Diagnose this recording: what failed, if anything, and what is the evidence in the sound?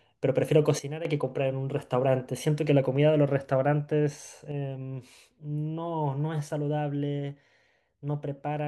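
A sudden gain jump occurs twice in this speech. From 0.79 to 1.05 s the level drops by about 10 dB and then returns, and from 4.52 s to the end it falls by about 6 dB and stays down. Speech and background noise step down together. The likely cause is a digital gain change in the processing or driver stage applied without a ramp. On the waveform, the envelope steps abruptly; the spectrogram shows a uniformly darker band.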